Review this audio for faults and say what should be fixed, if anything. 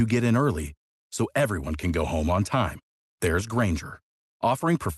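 Nothing stood out on listening to this speech as it came over the Opus call path, so there is nothing here that needs fixing.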